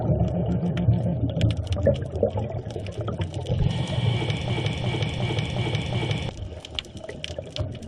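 At 4.50 s the audio snags into a broken-record loop, with a chunk of about 0.36 s repeating back to back five times until 6.29 s. It's likely a stalled player or stream resending its last fragment, so whatever belonged there is lost.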